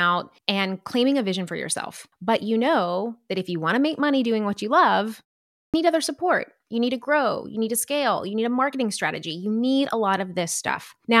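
At 5.62 s, after a 0.45 s pause following "doing what you love", there is a clipped start after a pause. The output path went idle during the silence and took about 118 ms to wake, so the onset of the next phrase was swallowed until 5.74 s, and "other support" bursts in abruptly without its opening sounds. On a waveform the trace jumps from flat silence straight to speech level with no rise. A spectrogram shows energy starting as a hard vertical edge.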